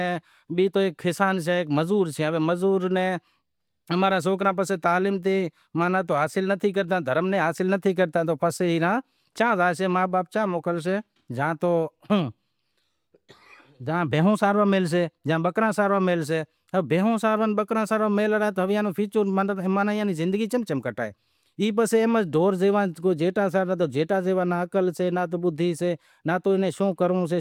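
No technical faults can be heard anywhere in this speech recording. Nothing in it calls for a timestamp or a diagnosis.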